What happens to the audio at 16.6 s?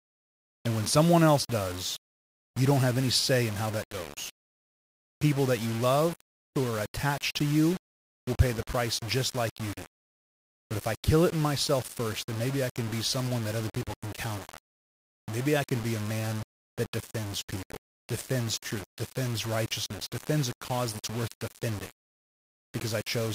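At 16.6 s the speech is grainy and distorted, as it is for the whole clip. The likely cause is low bit depth without dither, around 5 bits with plain rounding. The error tracks the signal at roughly 15 dB below it, so quiet passages crackle or sputter. Dithered reduction would instead leave a steady, even hiss.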